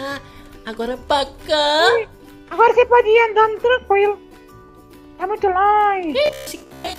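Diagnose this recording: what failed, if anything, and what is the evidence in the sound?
From 6.26 s to 6.98 s the sound turns into a rigid, metallic buzz with a fixed pitch of 66.8 Hz. This is robotic sound from repeated short buffers, and it points to the driver or buffer stage. The likely cause is fresh audio arriving too seldom, so the playback path loops its last fragment of about 15 ms while real material is skipped. Most of that stretch is repeated content. A spectrogram would show evenly spaced horizontal harmonic lines 66.8 Hz apart. The waveform would show near-identical cycles about 15 ms long.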